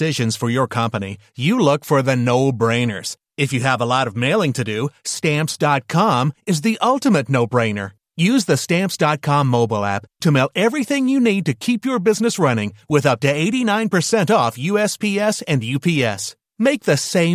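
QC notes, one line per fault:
No technical faults can be heard anywhere in the speech signal.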